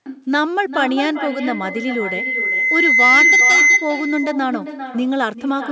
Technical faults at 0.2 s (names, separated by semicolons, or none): echo with no canceller